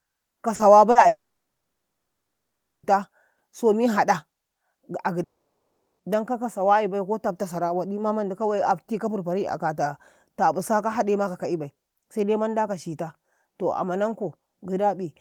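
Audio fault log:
0.55 to 0.62 s and 0.91 to 0.98 s, short concealed packet loss: each time about 40 ms of the call arrived too late for the decoder, so the receiver bridged the gap by extending the preceding sound and then blending back into the real stream. Each gap sounds like a brief smear or wobble in the speech, and whatever was spoken inside those 40 ms is gone.
1.07 to 2.86 s, long network dropout: most likely the stream stopped arriving for about 1.76 s. The receiver extended the last sound for a short moment, a fading buzz or hiss under about a tenth of a second, and then fell to about 1.7 s of silence. Speech resumes afterwards with the missing stretch simply absent.
5.23 to 6.02 s, long network dropout: right after "ga a", speech cuts off, and about 0.76 s is lost, likely through another interruption in delivery. The filled tail is almost instant, leaving roughly 0.74 s of silence before speech returns at "dan kaka sawayibai ko", without the lost portion.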